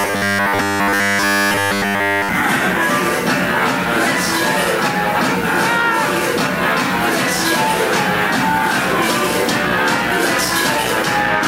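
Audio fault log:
0.01–2.29 s, robotic sound from repeated short buffers: the opening stretch becomes a rigid metallic buzz fixed at 100 Hz, and all of it is repeated material rather than new audio. The likely cause is that fresh data arrived too slowly, so a 10 ms block was looped to fill the gap, and that period sets the pitch. Unlike a stutter or dropout, the result is a steady, unchanging buzz that roughly tracks the sound's shape.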